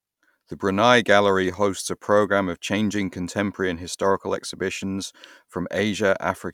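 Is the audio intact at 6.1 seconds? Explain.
Yes, at 6.1 s the audio is intact, with no dropout, click, distortion or other fault at that point.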